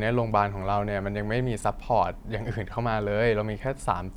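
At 1.60 to 1.64 s the speech briefly jumbles. These are chunks out of order: a 20 ms chunk arrived one chunk late and plays after the chunk that should follow it, so two short pieces swap places. All the audio is present, but there are three hard joins around the swap. That sets it apart from a dropout, which leaves a gap, and from a repeat, which plays the same audio twice.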